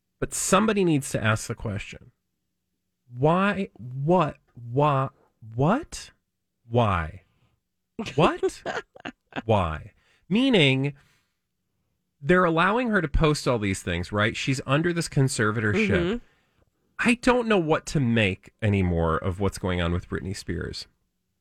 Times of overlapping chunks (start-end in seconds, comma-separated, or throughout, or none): none